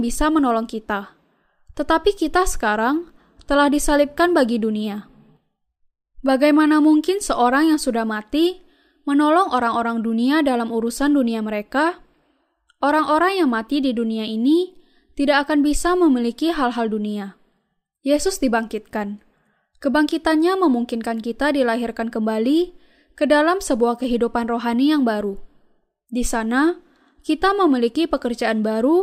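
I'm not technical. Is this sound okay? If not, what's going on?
Yes, I can't hear any problems in this recording.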